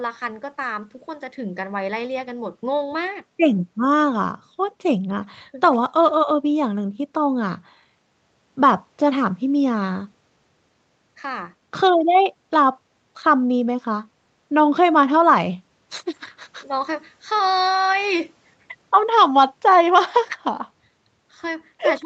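Nothing goes wrong anywhere in this speech recording, which sounds like it came through an ordinary call chain with the top end capped around 8 kHz.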